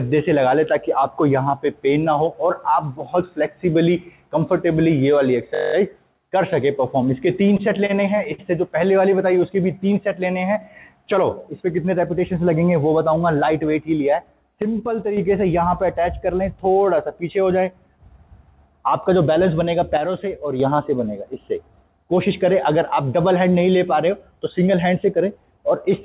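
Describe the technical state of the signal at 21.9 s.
At 21.9 s the audio is intact, with no fault present, and the band-limited sound with nothing above 4 kHz is the normal result of the call path's narrowband telephone codec, which fits 64 kbps G.711 mu-law.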